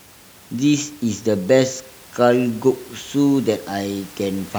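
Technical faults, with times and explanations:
Nothing stood out on listening, with only the room's own background noise sitting about 24 dB below the speech.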